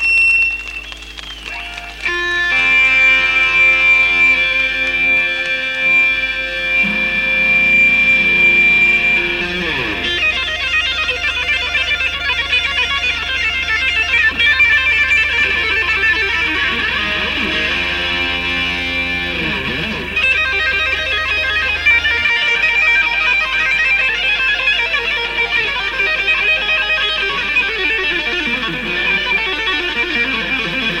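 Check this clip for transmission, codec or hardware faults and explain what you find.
One fault is present from start to finish: a filter restarted on every block. Because the filter loses its state at each block boundary, every block begins with a small transient. The repetition rate fits a 128-sample block. The result is a 375 Hz buzz that rises and falls with the sound's level. A spectrogram shows steady lines at multiples of 375 Hz, and the waveform shows evenly spaced spikes.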